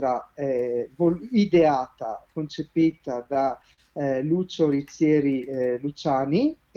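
From 2.91 to 3.80 s there's a run of repeated stalls (stutter): nine short gaps, up to 44 ms, get patched with repeated sound when late packets drain the jitter buffer, so it drags.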